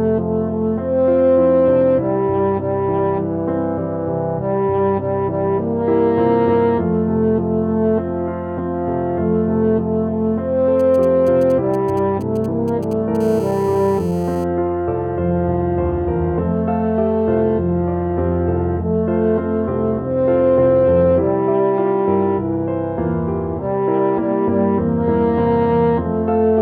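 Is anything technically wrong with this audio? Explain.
Yes. A nearby 2G mobile phone is interfering with the recording in two consecutive stages.

From 10.80 to 13.17 s there are GSM signalling bursts. The phone is transmitting only short groups of radio bursts, which fits the handshake before a call or message. The audio circuitry rectifies them into a galloping dit-dit-dit of short buzzes at the 216.7 Hz burst rate. They sit roughly 25 dB below the wanted sound.

From 13.21 to 14.44 s this turns into GSM phone buzz. The transmissions become continuous at 216.7 Hz, consistent with an active call. Rectification of the steady pulse train produces a hard, raspy buzz at that rate, rich in harmonics and unrelated to the programme material. It sits about 26 dB below the signal.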